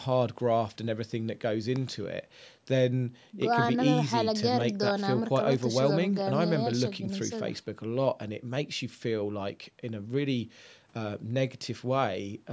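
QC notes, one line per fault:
Nothing to flag here, just speech that's been through ordinary call microphone processing, so the lowest bass is trimmed away and there's nothing above 8 kHz, which is normal for that path.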